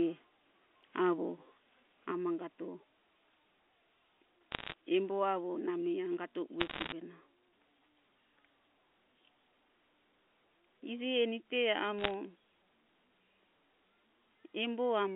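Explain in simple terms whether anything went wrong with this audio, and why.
One channel drops out at 2.11 s and stays gone to the end. The sound suddenly gets noticeably quieter, as if someone turned the volume down a notch, and it stays that way. The likely cause is that one side of a stereo recording was lost, so when both sides were mixed into one, only half the shared sound remained. Anything that existed only on the missing side vanished entirely.

Bit errors on a digital phone line appear in three short bursts: 4.52 to 4.74 s, 6.60 to 6.92 s, and 11.99 to 12.14 s. Each burst sounds like a brief crackle of sharp ticks laid over the speech. On a digital phone line, sound travels as a stream of ones and zeros. When some of those get flipped, the affected samples jump to wrong values, and the biggest jumps click. The first two bursts are denser, around one bit in a hundred going wrong; the last is lighter, roughly half that. 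Between bursts the telephone-quality sound itself comes through as a normal phone line would.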